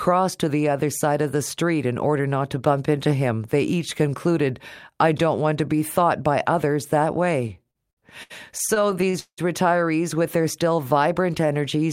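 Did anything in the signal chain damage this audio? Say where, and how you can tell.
Yes, at the network receive stage, in two places. From 7.41 to 9.40 s, right after "thought by others that", the audio shows repeated stalls (stutter). There are 16 gaps, filling about 0.5 s in total, or 25% of that span, and the longest is 182 ms. Packets arrived late or too slowly, so the jitter buffer kept running dry. Each time, the receiver extended the last sound until data resumed, fading it over the longer holds. Nothing is lost, but delivery drags and stutters.

From 10.14 to 11.47 s there is a jitter buffer slow-down. The audio plays at 92% speed with pitch unchanged, and 112 ms is added over that stretch, so sounds come out drawn out. Because the buffer was low, or its target delay had just been raised, the receiver rebuilt its reserve by repeating single pitch periods or pieces of pauses many times in a row. 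That stretches time without shifting pitch.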